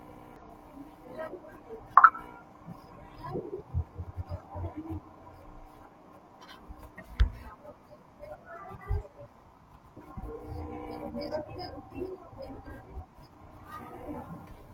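Damaged data in a compressed stream appears three times in this speech: from 0.36 to 0.42 s, from 3.56 to 3.62 s, and from 12.78 to 12.83 s, each lasting about 50 ms. At those points the encoded bytes are corrupt, so the decoder misreads the affected frames, loses its place in the stream, and must find the next valid frame boundary before it can continue. Each event is heard as a brief chirp, squawk, click or short hole cutting through the speech.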